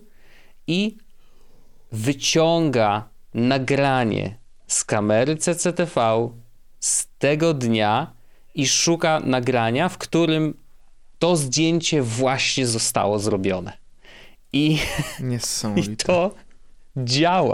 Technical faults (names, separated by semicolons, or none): Bluetooth SBC bit pool drop